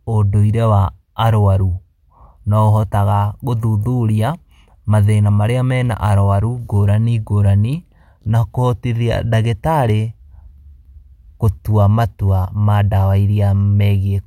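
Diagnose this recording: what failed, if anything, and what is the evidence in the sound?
Nothing in the speech stood out as a fault on listening, so no failed stage can be pointed to.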